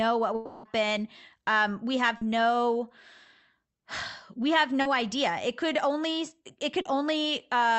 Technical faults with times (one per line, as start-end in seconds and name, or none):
0.35-0.65 long network dropout
2.17-2.23 short concealed packet loss
4.81-4.87 short concealed packet loss
6.81-6.87 short concealed packet loss